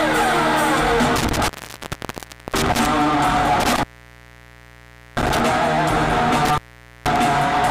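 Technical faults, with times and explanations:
1.16–2.86 s, 3.6–5.4 s and 6.45–7.16 s, intermittent contact: a loose cable or plug breaks the signal path, opening for about 1.06 s, 1.34 s and 0.48 s. The sound drops out with crackle at each edge, leaving faint hiss while the line is open.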